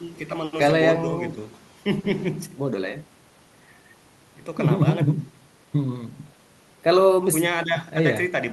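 Nothing in this speech recording stood out as a technical fault on listening.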